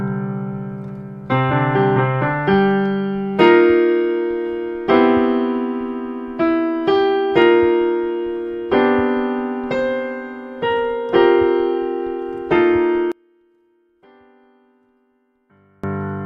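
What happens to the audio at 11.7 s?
Nothing goes wrong at 11.7 s; the audio plays through that moment intact, with no dropout, click, glitch or other fault.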